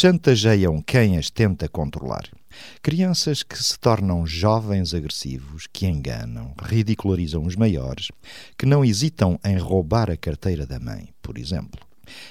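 No technical faults are audible.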